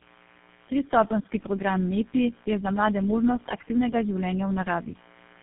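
A mains buzz runs through the whole recording. The raspy, spiky tone sits on 60 Hz harmonics and reaches well into the kilohertz range, about 30 dB below the speech. Its sharp edges, rather than a smooth sine hum, point to switching spikes from a dimmer or rectifier.

Tandem speech coding also colours the entire speech. The rough, muffled, warbling quality points to about three low-rate speech codecs in a row, each re-encoding the last one's damage, with nothing above 3.8 kHz. One codec alone would sound cleaner than this stacked degradation.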